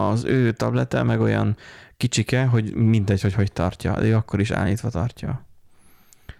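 Throughout, a stage is overdriven by about 2 dB, flattening the rare highest speech peaks. This hard clipping is heard as brief crackle on loud moments.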